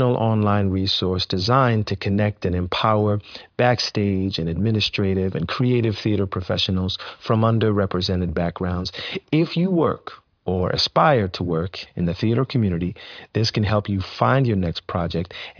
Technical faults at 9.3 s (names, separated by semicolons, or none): none